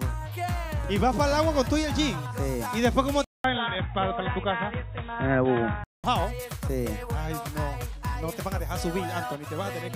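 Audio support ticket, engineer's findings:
Input likely switched to a poorer device, 3.24 to 6.04 s. Band cut off above 3.8 kHz, so the audio turns dull and boxy, then clears. About 200 ms silence at the switch. New background noise roughly 40 dB down; level roughly unchanged.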